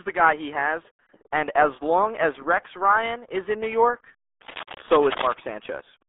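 Speech squeezed through the RealAudio 14.4 codec for the whole clip. The band sits roughly between 300 Hz and 3.6 kHz, with nothing at all above 3.8 kHz, so the voice comes out muffled and boxy. On top of that there's heavy gargly, smeared coding damage, which is what you'd expect from a low-rate speech coder built for dial-up. That thinness and churn fit the 8 kbit/s RealAudio 1 stream. From 4.41 to 5.34 s there's also cable scratch noise, a dense, uneven burst of crackly rustling that sits only a few dB under the speech, so it really cuts across it. That kind of texture is most likely a worn cable, connector or control being moved, with its contact resistance jumping around rapidly while it shifts.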